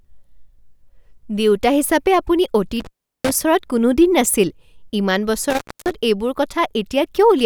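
At 2.80–3.31 s and 5.50–5.94 s, an intermittent contact opens the line, silencing the speech behind crackle and faint hiss, unlike a clean digital dropout.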